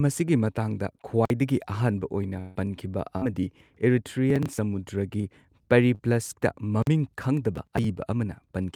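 At 1.25–1.30 s, just before "ꯑꯍꯥꯟꯕ ꯑꯣꯏꯅ ꯄꯟꯈꯤꯕ", and again at 6.82–6.87 s, a block of digital silence about 46 ms long, which fits a 2048-sample buffer left unfilled, cuts in. Each is heard as a short hole, and shows as a flat, near-silent stretch in the waveform.

After "ꯑꯍꯥꯟꯕ ꯑꯣꯏꯅ", from 2.39 to 2.57 s, the speech is replaced by a continued, fading sound for about 160 ms, likely a long network dropout. On the spectrogram it appears as smeared, flattened energy with no true silence.

Following "ꯑꯍꯥꯟꯕ ꯑꯣꯏꯅ ꯄꯟꯈꯤꯕ", a burst of packet loss at 3.17–3.26 s removes about 40 ms of speech. It is heard as a held, decaying sound, and the spectrogram shows stretched, blurred frames.

At 4.30–4.59 s, processor overload crackle appears: roughly ten buffers of about 10 ms each are skipped. This causes gritty tearing, seen as a cluster of vertical broadband lines.

Short concealed packet loss at 5.21 s (20 ms) and 5.95–6.01 s (40 ms) leaves brief smears where the receiver extended the previous sound, visible as slight blurring.

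At 7.56–7.84 s, a second burst of crackle skips around twenty buffers, producing a denser spread of vertical clicks.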